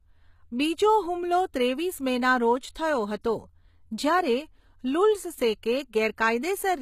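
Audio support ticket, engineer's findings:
Speech throughout clip: plainly audible HE-AAC compression damage, gritty, lispy sibilants, treble not matching harmonics below crossover, nothing above 14.9 kHz. Likely cause: low-bitrate HE-AAC encode, spectral band replication synthesising treble from copied lower bands, consistent with roughly 20 kbps.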